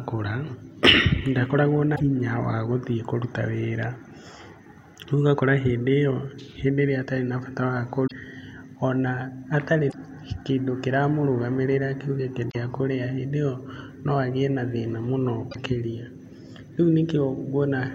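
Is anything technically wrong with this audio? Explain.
Yes. At 1.92, 8.03, 9.86, 12.48 and 15.48 s, there is damaged data in a compressed stream. Corrupted bytes make the decoder misread frames and lose sync while it searches for the next header, so each spot becomes a brief 80 ms chirp, squawk, click or short hole.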